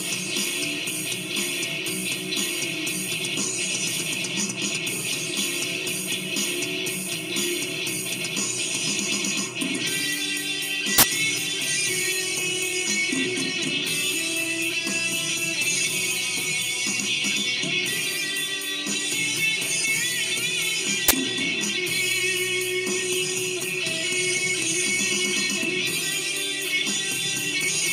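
Uninitialised buffer bursts hit at 10.98 s for about 46 ms and at 21.08 s for about 23 ms: loud, harsh digital noise where blocks played before audio was written into them, so stale memory came out as samples, which fits 2048- and 1024-sample blocks.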